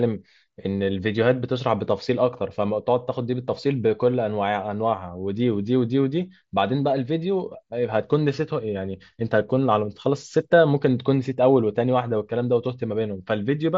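There are no technical faults to describe at any point in the speech.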